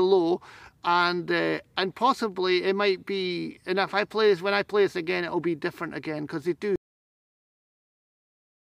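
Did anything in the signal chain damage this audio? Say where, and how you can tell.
Yes: a cut-off end at the storage or buffer stage. The final buffers were never written out, so at 6.76 s the sound stops mid-event and falls straight to digital silence with no natural decay, staying silent for the remaining two seconds or so.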